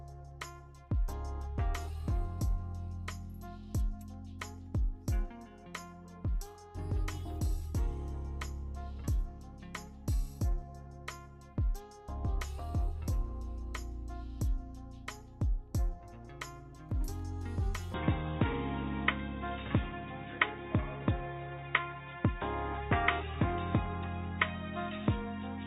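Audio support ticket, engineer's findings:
17.94 s to end: abruptly dull, boxy, no gap. Spectrogram cut flat at 3.8 kHz, new noise floor roughly 30 dB down. Likely input switched to a poorer device.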